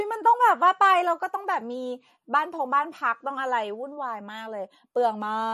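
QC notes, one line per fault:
Throughout: likely MP3 compression. The band stops dead at 12.6 kHz, and s sounds turn plainly watery and swirly as weak frequency lines flicker between frames. A spectrogram shows a flat ceiling with speckled gaps, pointing to a low bitrate near 39 kbps.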